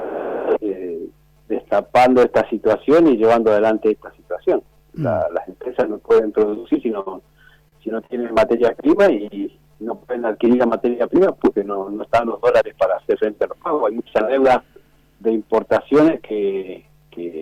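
Between 6.49 and 8.06 s, at 6.49, 6.54, 7.00, 7.68 and 8.06 s, there are short stalls from late packets. Each time the jitter buffer ran dry, so the last sound was held for 19 to 62 ms and then resumed without loss, leaving a brief buzzy drag.

From 12.41 to 13.01 s a jitter buffer speed-up plays the audio about 9% fast at unchanged pitch. The buffer had built up excess delay, so short pitch-period pieces, about 70 ms in total, were cut out, making the passage sound rushed.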